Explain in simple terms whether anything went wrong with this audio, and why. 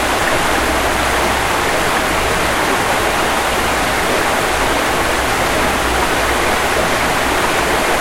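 A doubled audio track runs throughout: each sound repeats, equally loud, about a second and a half later, likely from a slower second recording path.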